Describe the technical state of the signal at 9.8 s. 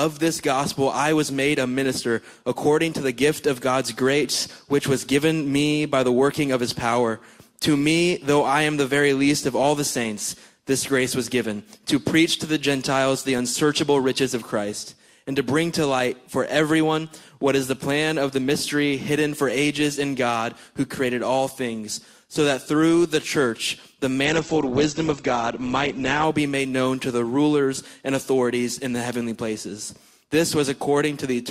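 At 9.8 s the signal is intact, with no dropout, distortion, clipping or other fault to be heard at that moment.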